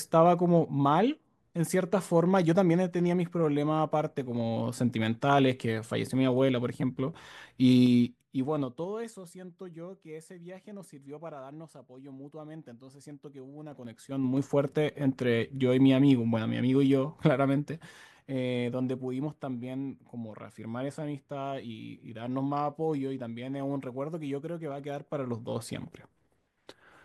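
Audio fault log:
7.77–9.05 s, 13.65–14.51 s, 17.66–18.26 s, 24.66–25.60 s, zipper noise: a ticking rides on the speech as the level drops about 20 dB, rises about 20 dB, drops about 10 dB, then rises about 10 dB. Each gain move jumps in unsmoothed 3 dB steps, roughly four to seven times a second, and every jump clicks.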